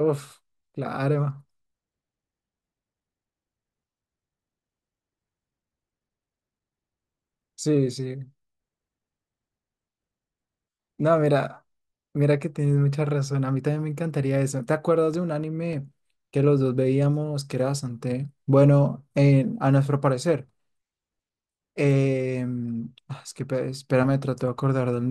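CD scratch ticks appear from 14.84 to 15.73 s: four short ticks, the longest a couple of milliseconds. A surface blemish wiped out more data than error correction could restore once per disc revolution, so the player patched or muted those samples, leaving a regular ticking pattern.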